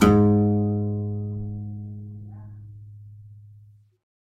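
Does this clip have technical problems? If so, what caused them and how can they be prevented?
No, nothing in this music clip points to a technical fault, so there is no cause to trace and nothing to prevent.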